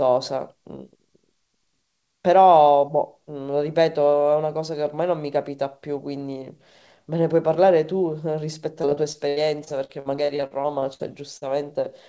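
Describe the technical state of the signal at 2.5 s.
At 2.5 s the signal is intact, with no dropout, glitch or distortion, only the band limit of a G.722 call path that leaves nothing above 8 kHz.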